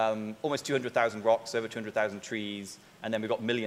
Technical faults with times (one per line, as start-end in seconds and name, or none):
none